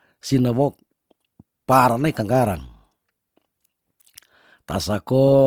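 Throughout the speech the sound is plainly grainy and rough, with tones turning noisy and few swirling spectral holes, and the top end reaches 20.2 kHz. The likely cause is Opus compression in music mode, filling starved bands with folded or noise content at a rate that fits 24 kbps.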